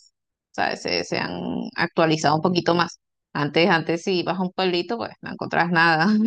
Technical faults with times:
2.20-3.04 overlap-add ripple

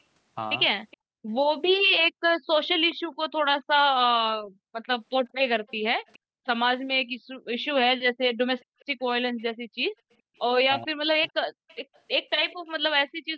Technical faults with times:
0.91-0.97 echo leak
2.90-2.95 echo leak
3.12-13.37 background gated by the echo canceller
5.68-6.18 echo leak
8.58-12.56 echo leak
10.86-11.32 speech suppressed in double talk

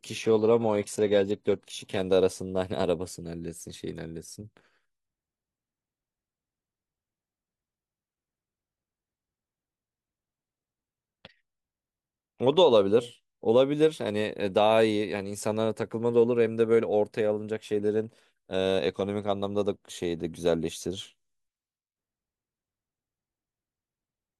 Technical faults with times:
0.00-2.00 adaptive stream starting at a low bitrate

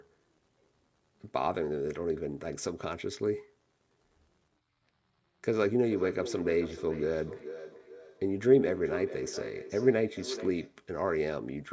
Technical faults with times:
5.82-10.84 feedback echo between two devices

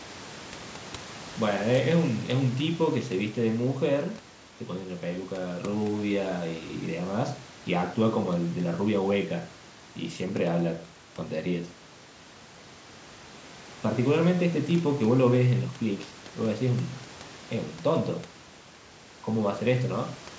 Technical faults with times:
none

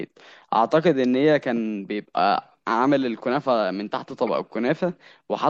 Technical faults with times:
0.00-5.49 MP3 compression
4.27-4.29 damaged data in a compressed stream

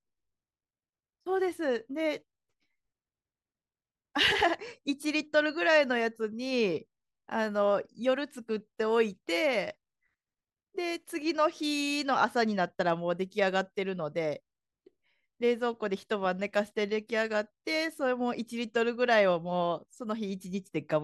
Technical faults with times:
none

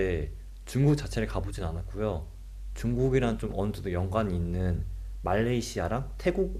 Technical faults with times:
none

